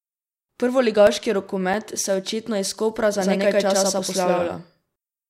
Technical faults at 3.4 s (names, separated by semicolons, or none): doubled audio track